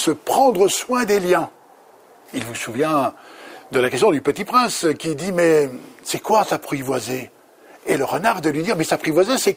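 No technical faults can be heard anywhere in the recording, and the signal stays steady and intact throughout.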